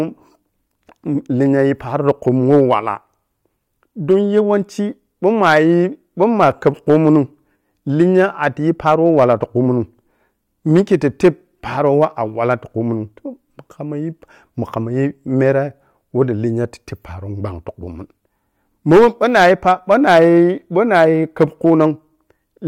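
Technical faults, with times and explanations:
Throughout, hard clipping: the speech is pushed about 6 dB past what the signal path can carry, so roughly one percent of samples have their peaks sliced flat. Those squared-off tops add high harmonics, heard as a gritty crackle riding on the loudest syllables.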